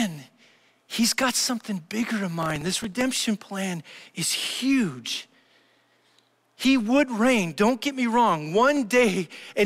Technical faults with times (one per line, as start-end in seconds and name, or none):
2.43-3.01 processor overload crackle